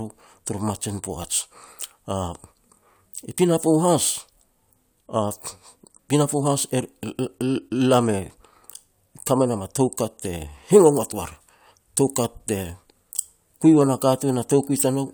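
Listening through the speech, nothing stood out as a technical problem at any point.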